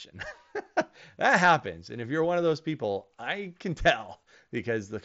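Nothing goes wrong anywhere in this speech, which comes over a Bluetooth mSBC headset link that tops out around 7.7 kHz, just as that wideband headset codec is built to.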